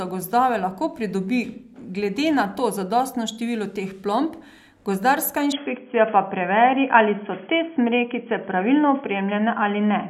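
At 5.52 s, right after "število teh plomb gozdarska", the speech abruptly turns dull and boxy, with nothing above 3.3 kHz, a level shift of around 5 dB and a faint new noise floor, with no gap. The input likely switched to a poorer device, staying there to the end.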